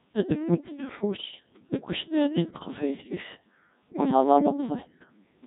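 Throughout, the audio passes through a Codec 2 vocoder at a very low rate, which fits about 1.6 kbit/s. Only pitch, voicing, energy and a coarse spectral envelope survive, and the decoder rebuilds the speech from sine waves, so it sounds heavily robotic and buzzy.

From 1.16 to 1.40 s, bit errors on digital voice radio corrupt a handful of frames at a rate of several percent. Each flipped bit scrambles a frame's pitch, level or spectrum, so the voice briefly lurches in pitch and loudness and dissolves into warbling, bleeping gibberish.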